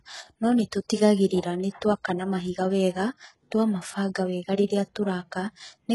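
HE-AAC compression runs through the whole speech clip, heavily applied, with nothing above 11.5 kHz. The treble here is likely rebuilt by spectral band replication rather than coded: the encoder keeps only the lower spectrum and copies those bands upward under a coarse envelope. Because the copied harmonics don't line up with the originals, the upper range sounds brittle, s sounds come out gritty and lispy, and the heavy damage points to a very low bitrate, around 12 kbps.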